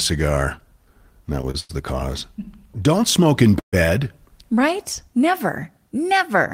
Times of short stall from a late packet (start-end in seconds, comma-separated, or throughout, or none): 1.51-1.71